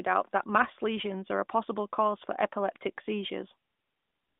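This is a speech clip with nothing technically wrong to point to, just the narrow, phone-call sound of an AMR narrowband mobile link with the top end rolled off a little below 4 kHz.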